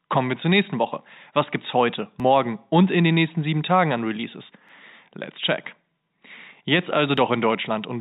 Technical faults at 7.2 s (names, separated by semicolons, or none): audio missing between chunks